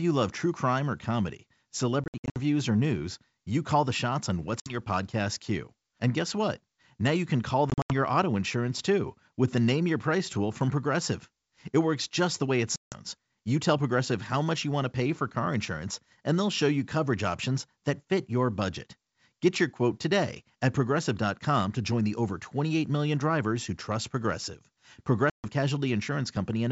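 Packet loss on an ADPCM call strikes at 2.04–2.36 s (between "true crime or comedy" and "or news you call"), 4.60–4.77 s, 7.70–7.93 s, 12.76–12.97 s and 25.30–25.46 s. Lost packets leave hard-edged silent holes, and the mismatched decoder predictor brings the sound back slightly distorted.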